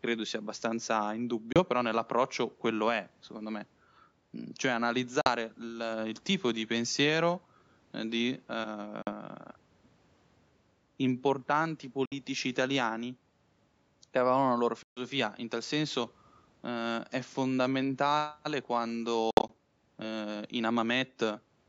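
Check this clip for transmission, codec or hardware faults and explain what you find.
Six short gaps break up the speech. They are likely Bluetooth dropouts, at 1.52–1.60 s, 5.21–5.29 s, 9.02–9.12 s, 12.05–12.15 s, 14.83–15.01 s and 19.31–19.54 s. Audio packets missed their delivery window and were discarded, so playback fell silent and resumed further along. The missing audio runs from 31 ms to 137 ms, and the last gap is a scatter of losses over 183 ms. The call's microphone processing leaves nothing above 8 kHz.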